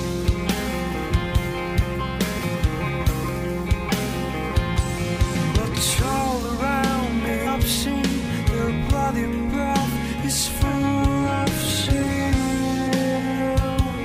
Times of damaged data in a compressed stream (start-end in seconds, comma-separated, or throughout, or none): 7.46